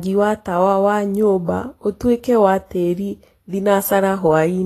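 Throughout, the likely cause is low-rate Vorbis compression, fitting about 33 kbps, which removes everything above 14.1 kHz and coarsely quantises treble, so the speech sounds plainly hissy and grainy.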